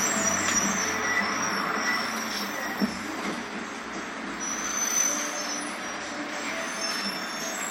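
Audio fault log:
No technical faults can be heard anywhere in these sounds.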